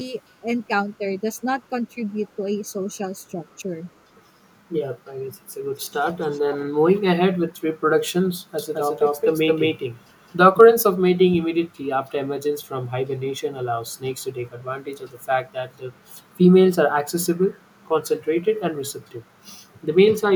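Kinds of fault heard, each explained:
speech suppressed in double talk: At 3.34 s the speech dips by about 5 dB for roughly 70 ms, likely an echo canceller turning its own talker down while both sides spoke at once. The waveform shows a brief notch in the envelope; the spectrogram shows a short faded strip.
echo leak: From 5.75 to 6.58 s a faint copy of the speech trails it by 420 ms, about 25 dB quieter, likely because a loudspeaker echo slipped past the far end's canceller. A spectrogram shows weak duplicate harmonic traces offset behind the originals, while the waveform barely changes.
doubled audio track: From 8.59 to 10.61 s the audio plays twice, a full-band copy about as loud as the original following roughly 200 ms behind, likely from a second, slower capture path. A spectrogram shows every pattern repeated without decay, and the copy starts and stops abruptly.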